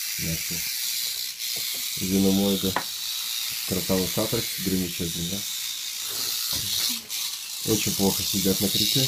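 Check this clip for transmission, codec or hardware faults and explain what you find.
No transmission, codec or hardware fault can be heard anywhere in this clip.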